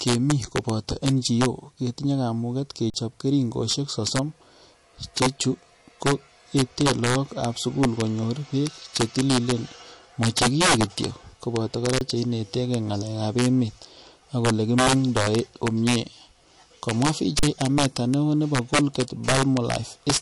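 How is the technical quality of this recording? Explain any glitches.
The speech has three problems: wrap-around cracks on loud peaks, a watery, band-limited codec sound throughout, and three brief dropouts.

Integer overflow runs through the whole clip. The loudest peaks crack. The signal was pushed about 7 dB past the integer limit, and under one percent of samples went over. Those samples wrapped to the opposite sign instead of being limited, flipping across the full range. This sounds sharper than ordinary clipping.

MP3 compression shows throughout as plainly audible watery, swirly texture and smeared attacks, with nothing above 11.3 kHz. The cause is likely a low-bitrate MP3 encode, around 48 kbps. At that rate weak frequency lines are zeroed and switch on and off between frames, and the treble is cut at a fixed point.

The underrun with held sample happens three times: at 2.90 to 2.94 s (40 ms), 11.99 to 12.01 s (24 ms) and 17.39 to 17.43 s (40 ms). 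Each time the sound goes flat and stops abruptly because the output buffer ran empty and the converter held its last value. Live audio was lost during each gap, about 40, 20 and 40 ms respectively.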